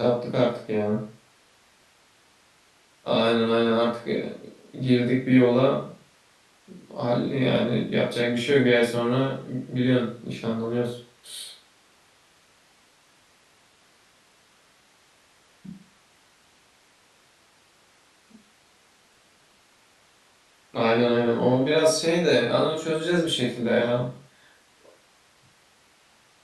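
No technical faults can be heard anywhere in this speech recording. Nothing in the audio stands out as a playback or transmission problem at any point.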